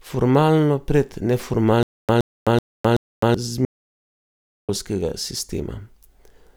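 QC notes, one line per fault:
1.83–3.34 s, stutter with silent gaps: the stream likely stalled, and each retry replayed the last buffered fragment before running dry. A 120 ms burst of speech repeats four times, each followed by 259 ms of digital silence, giving a steady 379 ms pulse.
3.65–4.69 s, audio dropout to silence: the input feed was likely cut while writing continued, so the recording holds silence for 1.04 s. The speech stops abruptly mid-flow, falls into dead silence with no room tone, and resumes with that stretch gone.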